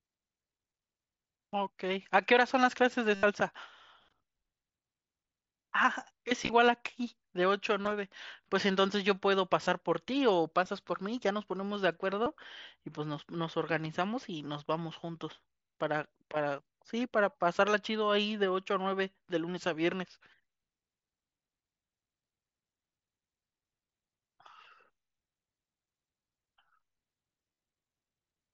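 Bluetooth headset packet loss, concealed by the receiver, strikes at 3.15–3.23, 6.44–6.53, 7.82–7.91, 9.64–9.67, 10.64, 12.24–12.26 and 27.54–27.58 s. Dropped packets were replaced by repeating the closest-matching recent waveform. The 82.5 ms gap at 3.15 s is clearest, a steady buzzy tone at full level ending in a slight warble. The scattered losses near 6.4 and 7.8 s, and the brief ones later, are shorter, with single dropped frames nearly hidden in the mSBC wideband audio.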